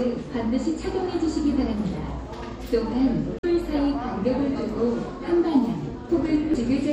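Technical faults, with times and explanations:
Throughout: MP3 compression. The sound has a watery, swirling quality, with the treble cut off and faint detail flickering in and out. This is likely heavy MP3 encoding, and the degree of damage points to a low bitrate of around 64 kbps. Sharp onsets also smear.
3.39–3.45 s and 6.51–6.56 s: damaged data in a compressed stream. Each brief span gives a short chirp or blip. Corrupted bytes there made the decoder misread frames and lose sync until it found the next frame header.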